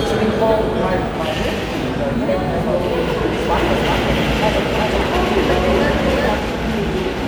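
From 3.51 s to 6.39 s the sound is doubled. A doubled audio track means a second copy of the same audio is mixed in, running a fixed time behind. Here the lag is around 0.4 s, and the copy is about as loud as the original. It is likely caused by the audio being captured twice, with one copy arriving late through a slower path. The echo is full-band and dry, with no decay or room colour. It cuts in and drops out abruptly at both ends.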